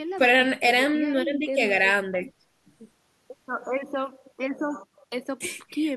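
A listener hears no technical fault anywhere in this speech recording.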